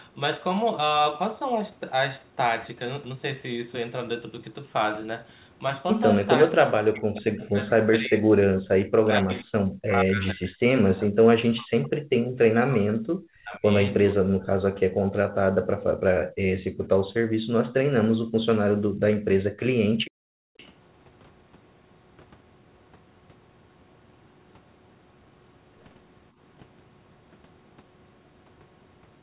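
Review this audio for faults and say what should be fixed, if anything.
Speech suppressed in double talk occurs from 6.48 to 12.15 s, 12.48 to 13.64 s and 14.13 to 14.81 s. The likely cause is the echo canceller failing to tell the local talker apart from loudspeaker echo while both sides spoke, so it attenuated everything. The speech drops by as much as about 40 dB, for roughly four seconds in the first stretch, about a second in the second and half a second in the third. Prevention: use a canceller with better double-talk detection and a gentler residual suppressor.

Background gated by the echo canceller appears at 15.95 to 16.72 s, 17.38 to 17.5 s, 18.89 to 19.0 s and 19.99 to 20.57 s. While the far-end loudspeaker was active, the canceller clamped the microphone hard, pulling the room sound down by about 40 dB. The ambience briefly drops out, from a tenth of a second to about half a second each time, then returns when the canceller releases. 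Prevention: add comfort noise or limit the suppressor's maximum attenuation so the background stays continuous.

An echo leak sits at 20.58 to 20.66 s, right after the last gating dip. Here the echo canceller likely let some of its microphone's loudspeaker pickup through, and that residue was sent back. It is heard as a short scrap of delayed sound, about half a second behind the original and roughly 30 dB below the speech, over the G.711 mu-law path with nothing above 4 kHz. Prevention: improve echo path modelling and delay estimation in the loudspeaker side's canceller, or use a headset.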